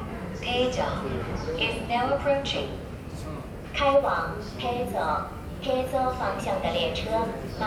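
Nothing technical stands out in this recording of sounds: there's no fault to point to anywhere in it, so it can just be enjoyed as it is.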